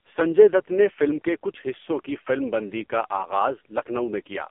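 Across the whole recording the speech carries heavy AMR narrowband mobile codec damage. The band runs from about 250 Hz to 3.4 kHz with nothing above 3.5 kHz. Unlike simple telephone filtering, the voice turns buzzy and synthetic, which fits AMR-NB's lowest modes near 5 kbps.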